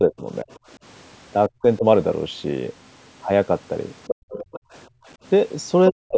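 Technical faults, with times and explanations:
0.0–0.49 s, 1.49–1.85 s and 5.9–6.17 s, speech suppressed in double talk: the echo canceller likely mistook overlapping talk from both ends for its own loudspeaker echo and clamped down on the microphone. The talker's speech sinks for roughly a fifth of a second in each of the first two spans, dropping by about 20 dB and then about 35 dB. At the very end it dips by about 40 dB for around a third of a second.
0.51–0.57 s and 4.07–4.77 s, other side's voice leaking through: the canceller likely failed to subtract all of the far-end voice picked up from the loudspeaker, so some of it stays in the microphone signal. The first leak is a faint scrap far below the talker, about 35 dB down. The second lasts most of a second and is much more obvious, only about 10 dB under the main speech.
4.15–5.08 s, background gated by the echo canceller: while the loudspeaker was active, the canceller turned the microphone down hard to suppress echo, taking the room sound with it. 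The ambient background falls away by about 36 dB in a hole of around half a second. It then comes back once the canceller releases the microphone.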